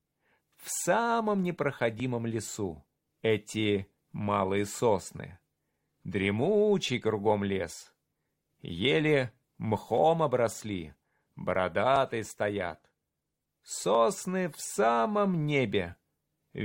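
Brief skips at 2.0, 3.99, 9.98, 11.96, 13.95 and 15.93 s come from overlap between stream segments. Overlapping time stamps made about 12 to 17 milliseconds of genuine audio get discarded at 2-second segment boundaries, so the waveform jumps. Unlike a dropout, there is no silent gap, only a tiny skip on that regular grid.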